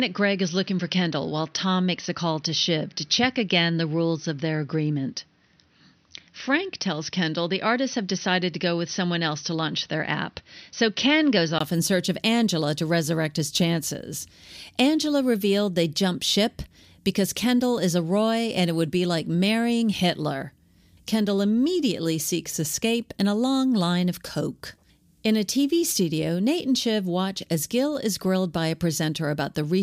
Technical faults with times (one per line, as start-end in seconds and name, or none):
0.00-11.60 input switched to a poorer device